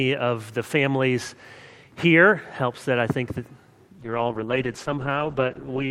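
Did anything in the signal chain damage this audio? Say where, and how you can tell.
Yes. A call bitrate drop at the codec stage from 4.03 s onward turns the sound rough and muffled, with highs cut. This fits roughly 96 kbps falling to about 11 kbps.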